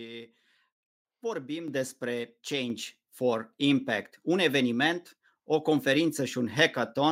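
At 1.68 s and again at 2.7 s, microphone volume stepped up by about 7 dB and about 4 dB. Unlike a speaker moving closer, voice and background noise jump together instantly.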